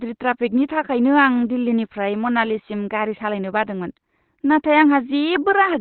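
Across this whole speech clip, the audio appears to have passed through a low-rate Opus compression stage, likely running the encoder in its SILK speech mode at a rate that fits roughly 12 kbps, with the bandwidth cut to narrowband. At that setting the codec discards most of the upper spectrum and models the voice coarsely, so the speech sounds muffled and hoarse from start to finish, with heavy codec damage throughout.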